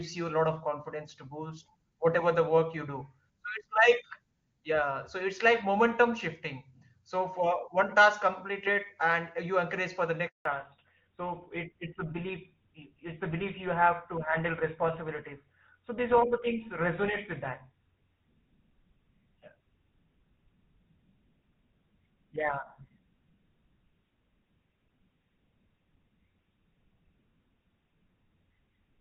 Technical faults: handover gap; fallback to narrowband

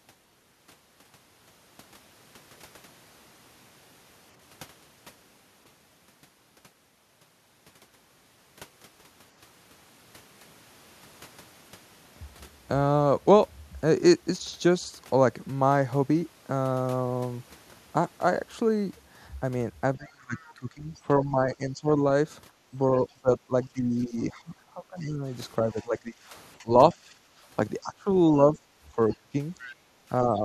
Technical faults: speech suppressed in double talk; other side's voice leaking through; background gated by the echo canceller

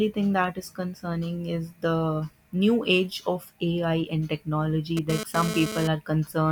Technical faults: GSM phone buzz

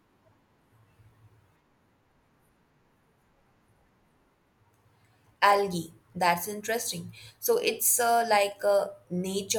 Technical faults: none

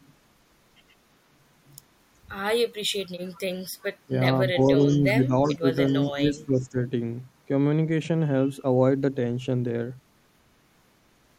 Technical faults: echo leak; speech suppressed in double talk

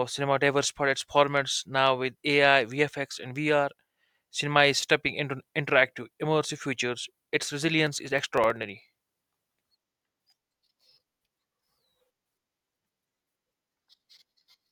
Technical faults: periodic USB or driver dropouts

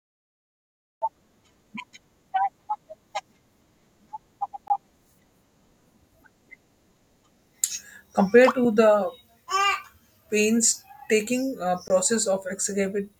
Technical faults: block of digital silence

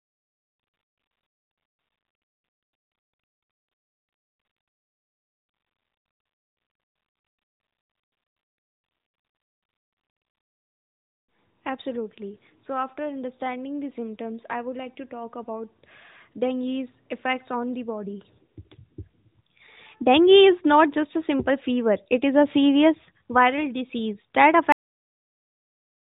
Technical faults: cut-off end

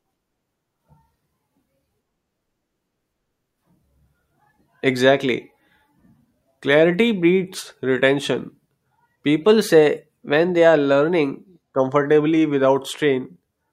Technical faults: drift correction step

